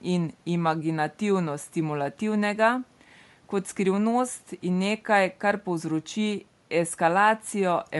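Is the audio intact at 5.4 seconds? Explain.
No. At 5.4 seconds the speech shows Bluetooth LC3 compression, present throughout the clip: the signal was likely squeezed through LC3 at a rate that fits around 48 kbps in 10 ms frames, with sparse upper spectrum filled by noise, leaving a plainly audible breathy, grainy edge.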